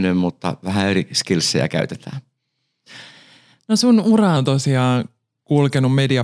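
From 4.37 s to the end, just after "sun ura", the speech drops about 1.5 semitones and slows to 0.92 times speed, a wrong sample rate fault consistent with 24 kHz audio played at 22 kHz. Pitch and tempo shift together, unlike pitch-shifting or time-stretching.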